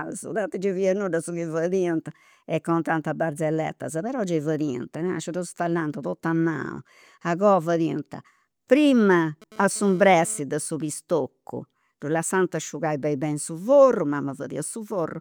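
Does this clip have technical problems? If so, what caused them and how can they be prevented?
Yes. GSM phone buzz runs from 9.11 to 10.40 s, ending just before "de su pistoccu ddu": a raspy 217 Hz buzz rich in harmonics, about 23 dB below the speech. A nearby 2G phone's data bursts were rectified by the audio circuitry. Keep phones away from the recording chain, or switch them off or to airplane mode.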